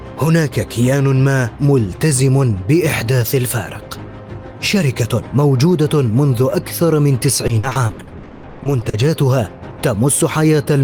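From 7.47 to 8.95 s, repeated packet loss (robotic sound): fifteen gaps, each up to 120 ms, are patched by extending the preceding sound, covering 45% of the stretch. The rapid succession of holes sets it apart from a single isolated dropout.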